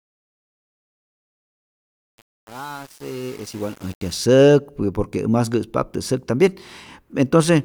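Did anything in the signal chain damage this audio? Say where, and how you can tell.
Yes. Truncation distortion on a fade is present in a sample-format or gain stage from 0.0 to 4.19 s. As the speech fades in, the quiet part sounds gritty, which points to the level being truncated to about 7 bits without dither.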